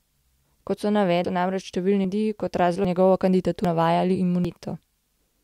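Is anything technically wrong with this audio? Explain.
Yes. The speech has audio missing between chunks, with abrupt skips at 1.25, 2.05, 2.85, 3.65 and 4.45 s. Each loses about a fifth of a second, and the two sides are joined with no gap, about 0.8 s apart. The likely cause is a processor dropping audio each time it switches between 1-second chunks.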